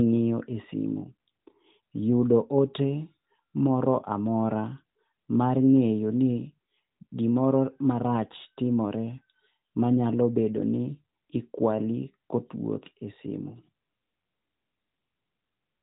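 Nothing goes wrong anywhere in this speech, which comes through the narrowband mobile codec the way a normal phone call would.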